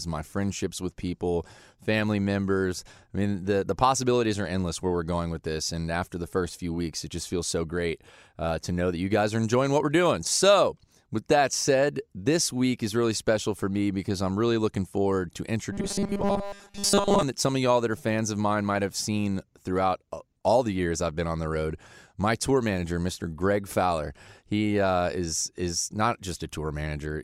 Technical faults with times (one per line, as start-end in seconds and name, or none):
15.72-17.23 robotic sound from repeated short buffers